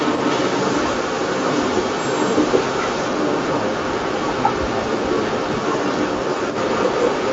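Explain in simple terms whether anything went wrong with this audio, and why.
Echo leak: a loudspeaker likely leaked into its own microphone, so from 0 to 7.33 s a slightly louder copy of the speech trails 0.17 s behind.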